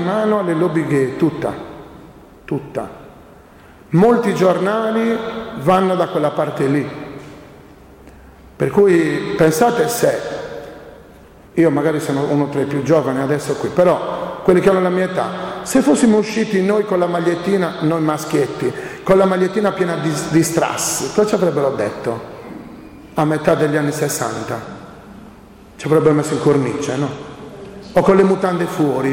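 From 15.66 to 16.50 s, and again from 24.64 to 28.49 s, the audio shows a Bluetooth SBC bit pool drop. A congested wireless link forced the encoder to spend far fewer bits, which fits a fall in bit pool from 31 to 15, roughly 105 kbps. The top sub-bands are starved, so the treble dulls, while coarse quantisation adds a gritty noise. A plain low-pass filter would dull the sound without that grit, and here both ease once the rate recovers.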